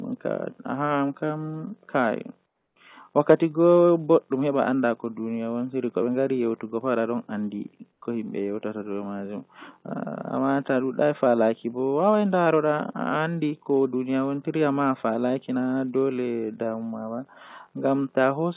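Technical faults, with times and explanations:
2.46 to 2.76 s and 7.92 to 8.02 s, comfort noise in place of the background: in these pauses, 300 ms and then 100 ms long, the faint background, about 50 dB below the loudest sound, turns into a smooth, featureless hiss, about 6 dB and then about 3 dB quieter. The likely cause is discontinuous transmission: the sender went silent and the receiver filled the gap with synthetic noise roughly matched to the background, over a telephone-band path with nothing above 4 kHz.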